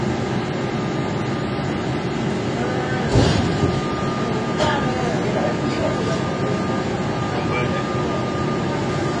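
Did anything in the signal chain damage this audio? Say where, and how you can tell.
Yes. The sound is dull and smeared throughout, with nothing above 9.8 kHz. That points to the codec stage, likely AAC compression at around 32 kbps, which coarsely quantises and truncates the spectrum.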